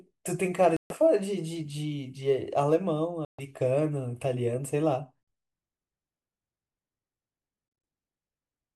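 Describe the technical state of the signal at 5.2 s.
From 5.23 to 5.28 s the speech drops abruptly to silence and resumes further on, likely a Bluetooth dropout where late packets were discarded before playback.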